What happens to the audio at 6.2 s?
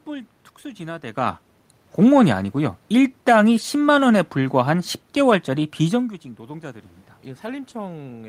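Nothing goes wrong at 6.2 s: the audio is intact there, and the change in level heard around 6 s comes from the talker shifting position relative to the microphone rather than from any fault in the system.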